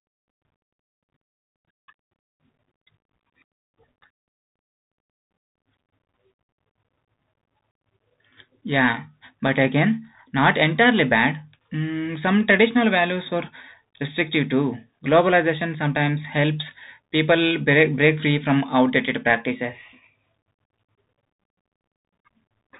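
Throughout the speech, a Bluetooth CVSD headset codec is at work. Nothing passes above 3.8 kHz, so the sound is narrow and muffled. Its one-bit steps cannot track loud high sounds, leaving s sounds scratchy over a granular hiss, which fits a 64 kbps CVSD stream.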